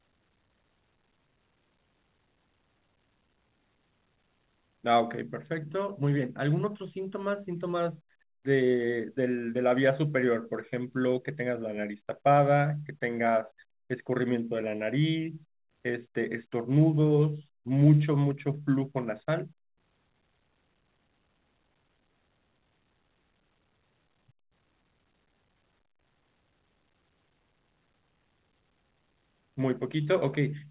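Nothing stood out on listening to this speech, which carries no content above 4 kHz, as expected of the narrowband telephone-style call codec it passed through.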